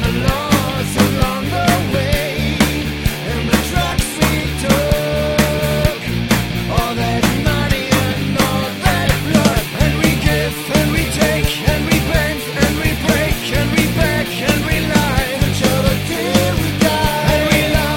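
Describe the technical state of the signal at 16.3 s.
At 16.3 s the audio is intact, with no audible fault at that moment.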